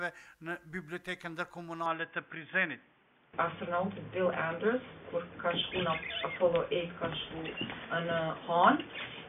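At 1.86 s the sound abruptly goes dull and boxy and stays that way to the end, with nothing above 3.5 kHz and a faint new background noise well under the signal. There's no gap and no level jump, so the input was likely switched to a poorer device.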